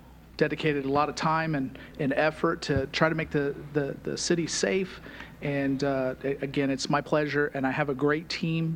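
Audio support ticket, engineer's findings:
Nothing turned up on a listen here, so no faults to log against this one.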